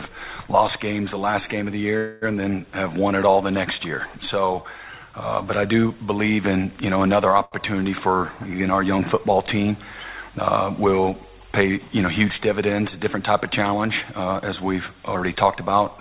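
At 1.97 s the audio hangs until about 2.36 s in a call audio freeze: the last sound carries on as a fading buzz for roughly a quarter of a second (246 ms filled in) before playback resumes exactly where it left off. The likely cause is packets delayed in transit that let the jitter buffer run dry. Unlike a dropout, nothing is skipped. The sound is simply pushed later, with a sustained, decaying tail rather than a hard cut.

At 7.45 s a short stall from a late packet holds the current sound for about 70 ms, ending near 7.55 s, with a slight buzzy smear as one packet failed to arrive on time and the receiver stretched what it had. It differs from the earlier freeze in scale: it reads as one sound dragged slightly long. The G.711 path has a narrowband 4 kHz ceiling.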